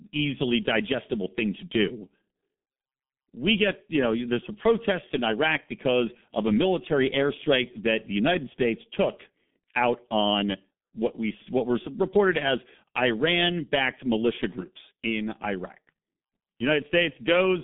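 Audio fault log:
Throughout: G.723.1 codec. The speech is confined to 150 Hz to 3.5 kHz, with nothing above 3.8 kHz. It sounds muffled and hoarse. Consonants smear. The heavy damage fits a rate near 6 kbit/s, where long 30 ms frames blur fast changes.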